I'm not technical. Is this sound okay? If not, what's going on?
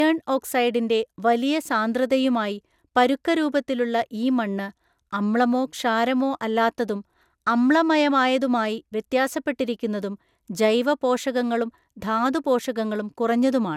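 No, not quite. The whole clip has a swirly, hollow quality, and the starts of sounds come across blurred. That's generation loss: the speech has likely been squashed into a compressed file, opened, and squashed again, around five times over, much like photocopying a photocopy. Each round shaves off more detail and adds a bit more smear. The top end also stops dead at about 17.3 kHz, consistent with an older MP2-type codec.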